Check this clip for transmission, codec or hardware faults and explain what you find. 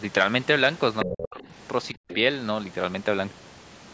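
A couple of echo-canceller problems show up in this call recording, both clustered between about 1 and 2.2 s and overlapping each other.

Other side's voice leaking through happens in two short scraps, 0.99 to 1.1 s and again around 2.1 to 2.15 s, sitting roughly 10 dB and then 15 dB under the main talker. It's likely loudspeaker playback the canceller didn't fully subtract from the mic, so you hear a faint second voice bleeding in.

Speech suppressed in double talk follows right on top of those, from 1.05 to 1.52 s and 1.94 to 2.18 s. The talker drops sharply, by something like 30 dB and then 40 dB, nearly vanishing. The likely cause is the canceller, confused by both sides talking, ducking everything at once.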